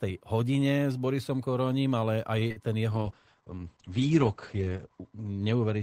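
Speech, and it runs into trouble just before the halfway mark. At 2.39 to 2.43 s there's a short stall from a late packet: the jitter buffer ran dry, so about 19 ms of the last sound gets held before carrying on, with nothing lost. Right after, two short concealed packet losses, at 2.47 to 2.52 s and 2.52 to 2.58 s, lose about 60 ms in total, patched over by extending the previous sound, so you get a brief smear. From 2.90 s to the end there's a call bitrate drop from 32 to 9 kbps, with bandwidth falling from 20 kHz to 8 kHz, so the audio goes muffled and rough.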